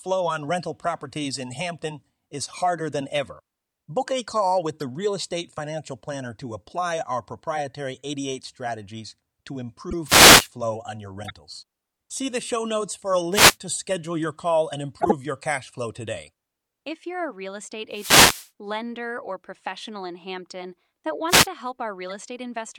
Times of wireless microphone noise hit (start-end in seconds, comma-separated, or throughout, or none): 10.05-10.50, 13.31-13.57, 17.91-18.51, 21.28-21.47